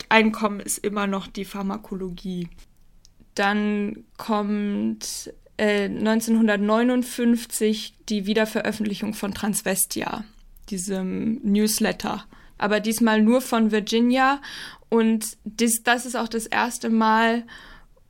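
A digital gain change was likely applied without a ramp, a sudden gain jump in this speech clip: at 0.47 s, speech and background noise drop together by about 6 dB and stay lower to the end.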